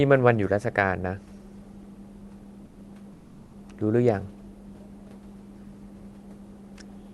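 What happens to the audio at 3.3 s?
From 3.13 to 3.53 s, a 0.4 s stretch, the real room background gives way to comfort noise in place of the background: a steady, featureless hiss about 3 dB quieter than the ambience around it. The likely cause is discontinuous transmission in the Opus call path, where the sender stops sending during the pause and the receiver synthesises noise shaped roughly like the background. Unlike a dropout, the pause never falls to silence; it loses the background's detail.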